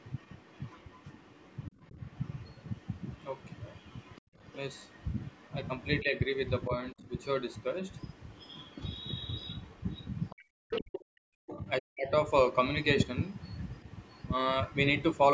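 From 0 to 5.85 s, faint other side's voice leaking through sits about 30 dB under the talker, likely leftover echo the canceller missed. It returns louder, about 15 dB down, from 7.54 to 11.53 s, and very faint from 13.37 to 15.17 s. Speech suppressed in double talk shows up as brief dips at 1.7, 4.21, 6.02 and 6.67 s, then a near-dropout of around a second between 10.34 and 12.11 s. That's likely the canceller ducking the talker along with the echo.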